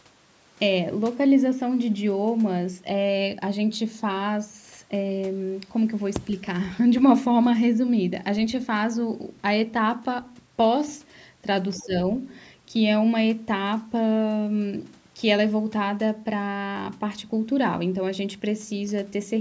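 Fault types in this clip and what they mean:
other side's voice leaking through: From 11.76 to 11.85 s a faint second voice appears for a fraction of a second, sitting roughly 25 dB below the main speech. This is likely loudspeaker playback of the far end that the echo canceller failed to remove from the microphone. On a spectrogram it shows as a weak, separate set of harmonic bands overlaid on the talker's own. The waveform barely changes, because the leak is so far down in level.
speech suppressed in double talk: Between 11.8 and 11.94 s the talker's level dips by around 10 dB, over roughly a tenth of a second in total, while the leaked far-end sound overlaps it. Likely the echo canceller could not separate the talker from the echo and attenuated both together. In the waveform the envelope sags briefly. On the spectrogram the speech energy fades across the band, up to the 8 kHz limit, and then recovers.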